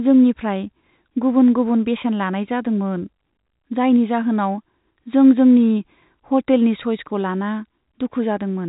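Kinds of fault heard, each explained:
No faults of any kind.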